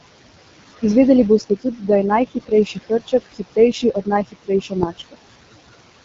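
Noise suppressor artifacts run through the whole clip. The room noise, about 12 dB below the speech, is pulled down by about 19 dB in the gaps and comes back under the speech, so the residue pumps.

The AMR wideband (HD Voice) codec is also present throughout, with plainly audible damage. The speech has a rough, raspy grain that points to one of AMR-WB's lowest modes, around 8.85 kbit/s, and nothing is heard above about 7.5 kHz.

Speech cut by the noise suppressor occurs four times, where the suppressor treated speech as noise. The affected spans are 1.39 to 1.89 s (about 200 ms affected, drops of up to about 17 dB), 2.3 to 4.08 s (roughly 700 ms affected, up to about 20 dB), 4.25 to 4.73 s (about 200 ms, up to about 21 dB) and 4.89 to 5.16 s (about 150 ms, up to about 20 dB). In these spans soft sounds and endings come out swallowed and faint.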